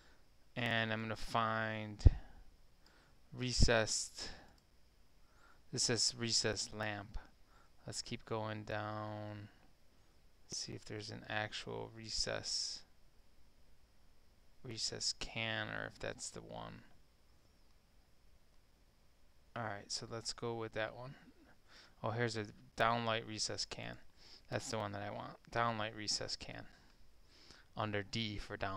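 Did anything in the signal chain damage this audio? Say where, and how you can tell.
Yes: four sharp clicks at 0.66, 6.83, 22.80 and 24.80 s, likely dropped samples in the driver or buffer stage, each losing under a millisecond. The waveform steps abruptly, and the spectrogram shows thin vertical lines.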